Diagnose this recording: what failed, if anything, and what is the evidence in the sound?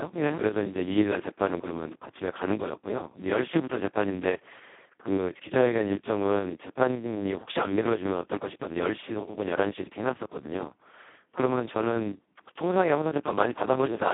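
Codec stage: the whole speech clip has heavy Speex codec damage, hoarse and robotic, band-limited to 150 Hz–3.5 kHz with nothing above 3.8 kHz, which fits a starved bitrate around 2 kbps.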